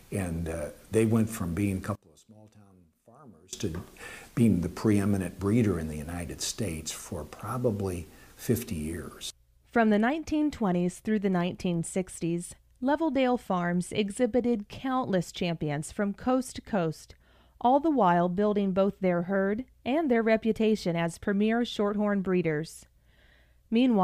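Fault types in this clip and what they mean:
One channel inverted: from 1.96 to 3.53 s the sound drops about 26 dB to a faint residue, likely because one stereo channel has reversed polarity. When the channels are combined, everything common to both cancels and only their difference remains.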